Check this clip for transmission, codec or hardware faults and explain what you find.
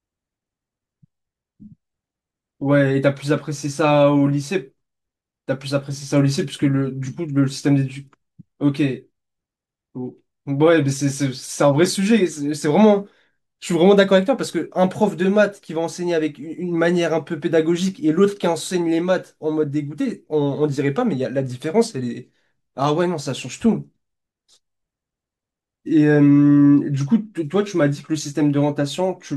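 Nothing stood out on listening to the speech in this recording.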